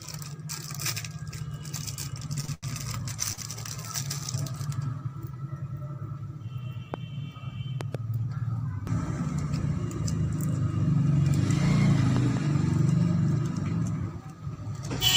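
Short stalls from late packets occur at 2.40–2.44 s, 2.45–2.49 s, 2.54–2.64 s and 3.33–3.39 s. Each time the jitter buffer ran dry and the receiver held the last sound for 29, 27, 88 and 48 ms, adding equal delay while losing nothing. The result is a brief hang with a slight buzz or dip.

A loud pop lands at 6.94 s, then double pops at 7.81–7.97 s and 12.17–12.39 s, peaking about 15 dB above the sound for the first two and about 10 dB for the last, likely from electrical transients such as switching or static.

A jitter buffer speed-up runs from 13.37 to 14.26 s. The receiver trimmed short pitch-period pieces, around 40 ms in total, to shed excess delay. The audio plays at 104% speed with unchanged pitch.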